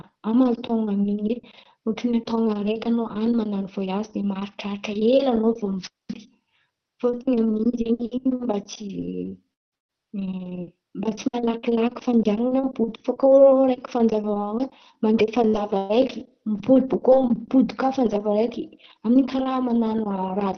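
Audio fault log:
8.35–8.42 s, short stall from a late packet: a packet arrived about 40 ms late and the jitter buffer briefly ran dry. The receiver stretched the last sound for those 40 ms and then picked up exactly where it left off, so nothing is lost. What you hear is one sound held a touch too long, with a faint buzzy or dipped quality during the hold.
8.39–8.45 s and 10.43–10.49 s, lost packet rebuilt from error correction: in each case a 60 ms stretch was lost. The following packet carried a low-bitrate backup copy, so Opus played that copy and there is no gap. The rebuilt audio sounds rougher and noisier than the surrounding material. The second instance comes just before "mba tsy malakilaky fandianan̈a". Because this call runs at about 20 kbps with audio up to 6 kHz, the effect shows as coarseness rather than as lost treble.
9.53–9.74 s, long network dropout: about 0.18 s of audio is gone. 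The last sound carries on as a buzz that fades to near-silence, and then the audio resumes further along without the missing part. The most likely cause is a stretch in which no packets arrived, so the receiver had nothing to play and could only extend and then fade what it already had.
9.77–9.94 s, burst of packet loss: just after the dropout, about 120 ms of consecutive packets failed to arrive in time. The receiver extended the last sound and faded it over roughly 110 ms, which gives a held buzz or hiss. The audio then jumps ahead, so the content in between is missing. The playout timing also shifts by about 11 ms as the buffer adjusts.
15.48–17.16 s, repeated packet loss (robotic sound): three separate losses fall within this span, about 180 ms in total, and the longest is around 119 ms. Each hole is patched by continuing the previous sound, and roughly a tenth of the span is concealment. 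The result is a choppy texture with small pieces missing, because the patches recur before the audio fully settles.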